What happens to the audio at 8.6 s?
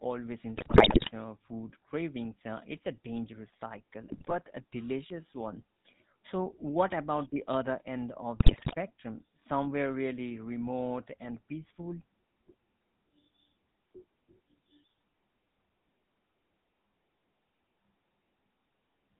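At 8.6 s the speech is in the middle of a burst of GSM bit errors running from 8.40 to 8.75 s. Corrupted bits are reaching the decoder, so the filter, pitch and gain values it rebuilds are wrong frame after frame. The spectrum bends and the level jumps, and the voice breaks into squawks, pops and gargling. The burst spans about 17 frames of 20 ms and points to a heavy error rate of around 6%. Unlike a dropout or lost packet, the sound never goes silent or repeats. It keeps coming, but mangled.

Underneath, as across the whole clip, is the GSM full-rate codec, which fits its 13 kbps rate. It models the vocal tract and excites it with regularly spaced pulses that keep only every third excitation sample, so the speech carries a buzzy, gravelly roughness. Nothing above 4 kHz gets through. Plain band-limiting would only sound muffled, but this also has a grainy, reedy texture.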